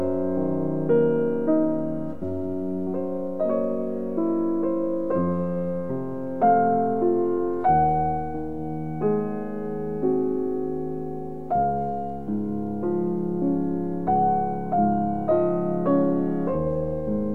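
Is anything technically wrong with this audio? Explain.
No, nothing technical stands out here; it all comes across just as it should, with nothing getting in the way of the sound.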